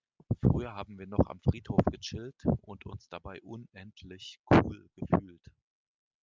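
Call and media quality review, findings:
No findings for this call and media quality review.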